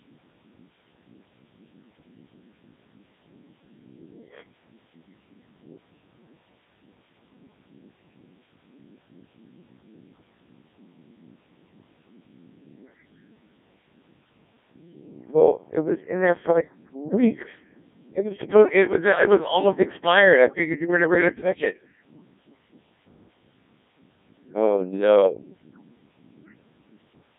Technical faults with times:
0.00-27.39 Codec 2 vocoder

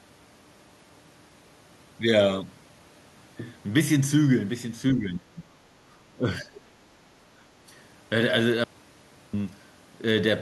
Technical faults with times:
4.93-5.55 speech suppressed in double talk
6.18-6.57 speech suppressed in double talk
8.64-9.33 audio dropout to silence

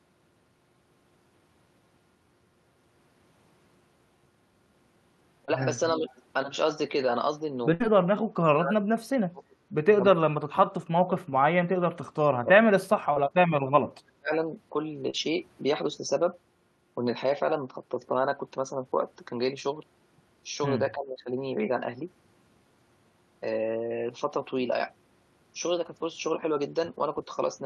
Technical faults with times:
5.45-5.50 short concealed packet loss
5.87-6.22 echo leak
5.99-6.06 speech suppressed in double talk
7.74-7.82 burst of packet loss
8.03-9.57 speech suppressed in double talk
10.18-11.22 speech suppressed in double talk
11.66-12.66 speech suppressed in double talk
13.14-13.18 short concealed packet loss
13.43-14.30 speech suppressed in double talk
15.10-15.15 short concealed packet loss
20.95-21.30 speech suppressed in double talk

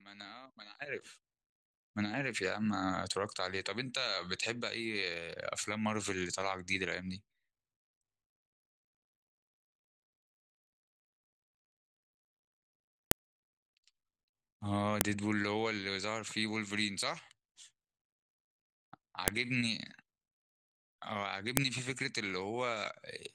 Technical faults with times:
13.11 file header played as audio
15.01 file header played as audio
19.28 file header played as audio
21.57 file header played as audio

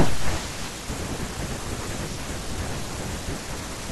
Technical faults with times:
none

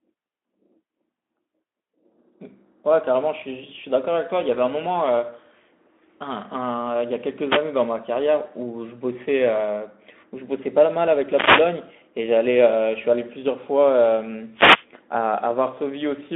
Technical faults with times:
7.47-7.65 wireless microphone noise hit
11.29-11.69 wireless microphone noise hit
14.52-14.86 wireless microphone noise hit

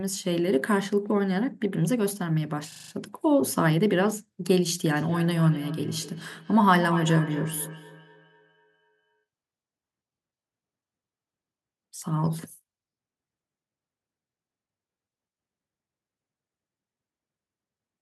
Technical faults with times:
2.72-2.92 system hang loop
4.96-9.24 feedback echo between two devices

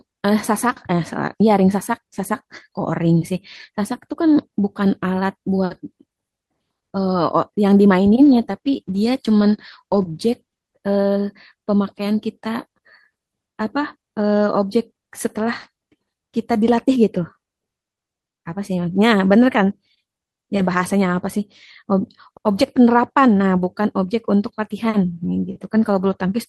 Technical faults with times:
8.22-11.03 call bitrate drop

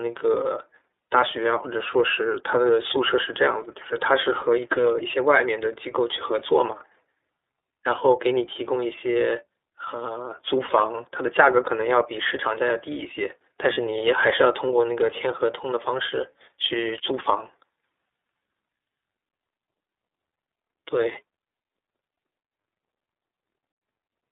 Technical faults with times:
0.00-24.31 iLBC codec
13.73-13.78 lost iLBC frames

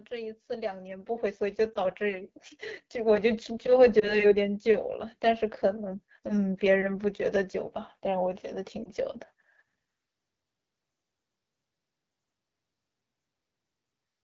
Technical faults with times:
0.00-14.24 AMR wideband (HD Voice) codec
0.07-2.37 automatic gain rising
1.74-1.80 lost AMR speech frames
4.00-4.31 lost AMR speech frames
8.83-8.89 lost AMR speech frames

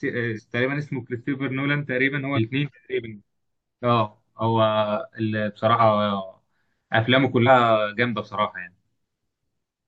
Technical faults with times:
0.35-0.40 compressed frames skipped
2.35-2.39 compressed frames skipped
5.78-5.81 compressed frames skipped
7.46-7.50 compressed frames skipped
9.64 compressed frames skipped

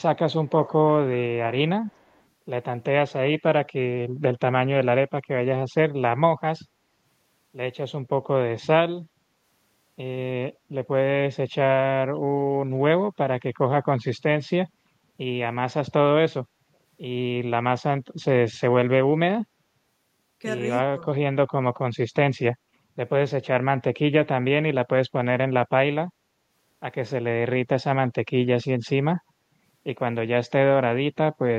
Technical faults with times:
1.86-2.22 echo leak

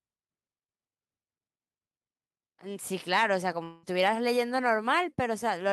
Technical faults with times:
3.13-3.24 hard clipping
3.63-3.85 long network dropout

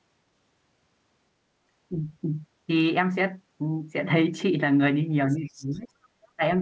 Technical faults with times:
5.30-5.79 other side's voice leaking through
5.33-5.91 speech suppressed in double talk
6.36-6.42 speech suppressed in double talk

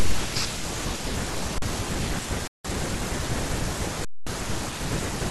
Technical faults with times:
1.58-1.62 underrun with held sample
2.47-2.65 underrun with held sample
4.05-4.27 underrun with held sample

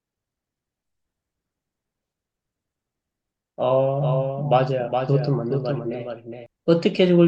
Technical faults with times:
3.98-6.46 doubled audio track

